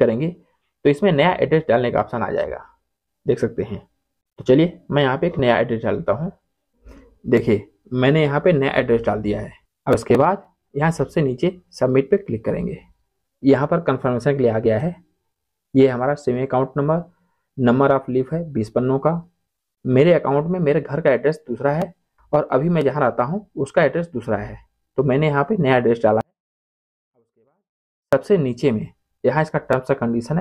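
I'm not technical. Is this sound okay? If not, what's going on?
No. From 26.21 to 28.13 seconds the sound suddenly drops almost to silence, though what remains is clean. This is a 24-bit alignment error: the audio was stored in the wrong part of each number, so it reads as tiny values.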